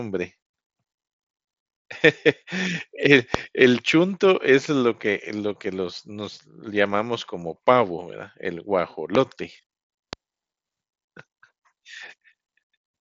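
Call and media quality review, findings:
Loud pop, three events: 3.34–3.37 s, 9.15–9.17 s, 10.13–10.15 s. Likely a voltage step or static discharge injecting one short pulse. Heard as a sharp single pop roughly 20 dB, then 15 dB, above the speech, which continues underneath.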